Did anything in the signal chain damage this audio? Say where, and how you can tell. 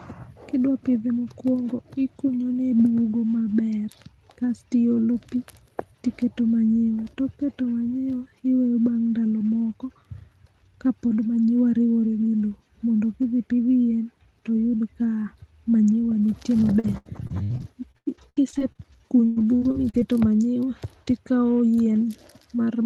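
Yes: network-stage repeated packet loss from 16.29 to 20.03 s. About eighteen holes, up to 100 ms, were patched by stretching the previous sound, leaving the speech choppy and robotic.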